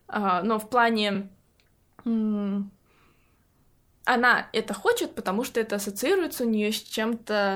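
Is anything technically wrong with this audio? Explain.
Yes. In this speech clip a compressed frame was delivered twice, a repeated-frames fault. At 1.14 to 1.17 s one 24 ms block, which fits a single codec frame, plays once more, adding 24 ms. At 6.85 to 6.90 s the same happens with a 24 ms block played twice extra, adding 48 ms. The decoder simply replays the duplicated data, so the sound briefly stutters and the timeline stretches by those amounts.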